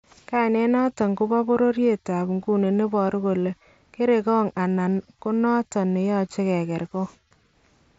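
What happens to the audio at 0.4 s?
At 0.35 s there is a brief concealed Bluetooth headset packet loss. A tiny stretch of about 7.5 ms never arrived from the headset, which fits a single lost frame. The receiver filled the gap by repeating the best-matching piece of the waveform just before it. Because the gap is so short, the patch is almost inaudible.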